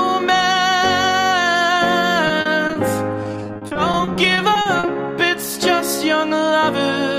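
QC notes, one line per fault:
2.27–2.77 s, repeated packet loss (robotic sound): choppy stutter. Brief dropouts up to 40 ms, about a fifth of the stretch, are patched by stretching the preceding sound.
3.23–4.97 s, repeated packet loss (robotic sound): longer, denser robotic chop. Gaps up to 40 ms, about a quarter of the span, arrive in quick succession, each papered over by repeating what came before.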